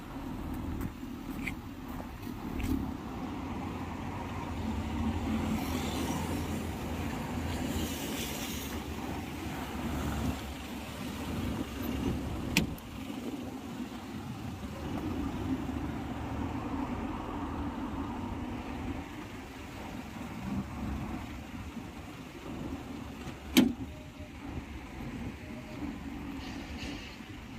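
No technical faults are audible.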